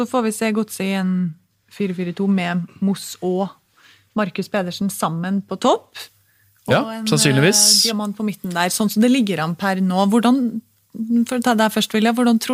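From 6.0 s to the end, pre-emphasis is left on. The CD-style 50/15 µs treble boost was never undone, leaving about 8 dB extra at 10 kHz. The speech turns thin, bright and sibilant.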